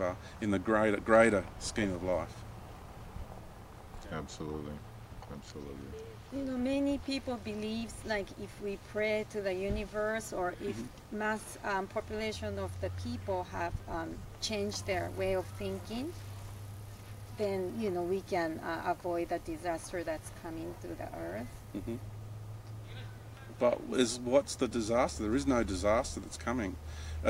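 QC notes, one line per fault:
No faults detected in the audio.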